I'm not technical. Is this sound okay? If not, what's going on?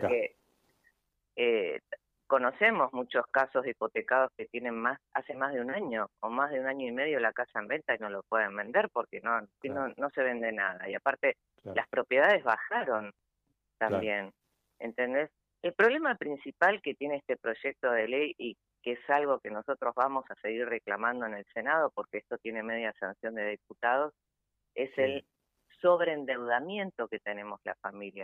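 Yes, nothing in this sound stood out as a problem when I listened to it.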